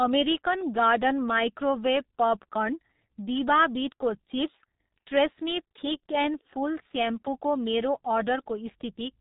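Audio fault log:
throughout G.723.1 codec: speech sounds muffled and hoarse with blurred consonants and nothing above 3.8 kHz, from heavy coding at a bitrate fitting about 6 kbit/s.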